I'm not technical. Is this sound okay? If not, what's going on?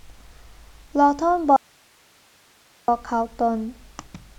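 No. Audio dropout to a faint residue, 1.56 to 2.88 s: the speech suddenly cuts out, leaving only faint hiss, likely from a temporary signal loss.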